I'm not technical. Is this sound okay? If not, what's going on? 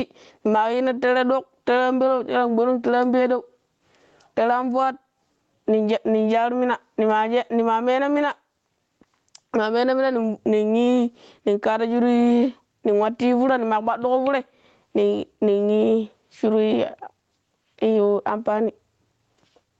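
No. Throughout the recording, the level gets pushed down whenever speech gets loud, so loud and soft parts end up squashed together. That's gain pumping, likely from the microphone level set too high, with automatic leveling fighting it.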